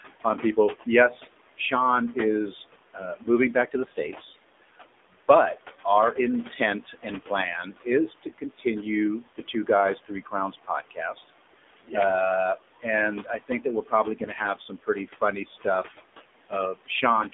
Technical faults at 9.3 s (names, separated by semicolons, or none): noise suppressor artifacts; AMR narrowband mobile codec; speech cut by the noise suppressor